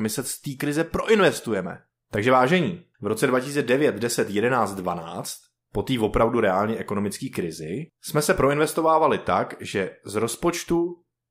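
A speech recording whose sample-rate converter was restarted on every block throughout, likely during a 48 kHz to 44.1 kHz conversion. Each 40 ms block was converted in isolation, so the filter had no real neighbouring samples at the block edges and left a small error at every boundary. Those errors recur 25 times a second, forming a buzzy tick under the speech for the whole clip. The buzz follows the signal and drops away in the pauses.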